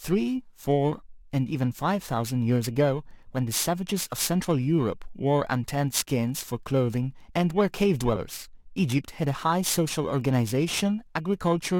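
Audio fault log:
Throughout: periodic clock jitter. The converter's sample clock is being nudged back and forth at a steady rate of around 3 kHz, so each component of the speech picks up a pair of sidebands offset by that amount above and below it. The sidebands grow with frequency, which puts most of the damage on sibilants and upper harmonics and gives the speech a rough, metallic edge. In pauses there is nothing to modulate, so the edge disappears with the sound.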